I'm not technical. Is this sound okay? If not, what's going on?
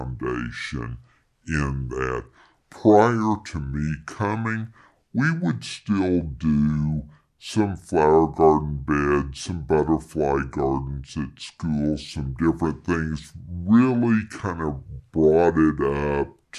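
No. The whole clip, from start to finish, has a wrong sample rate fault. It was recorded at 48,000 samples per second but played back at 32,000, so everything runs at about two-thirds speed, and the speech sounds slow, heavy and deep, about seven semitones lower. What gives it away is that speed and pitch dropped together. A simple slow-down would keep the pitch, and a pitch change would keep the pace.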